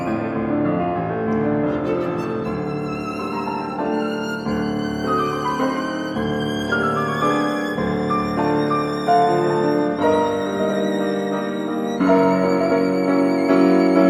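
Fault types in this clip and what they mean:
Nothing here stands out as a technical fault, so there's nothing to list.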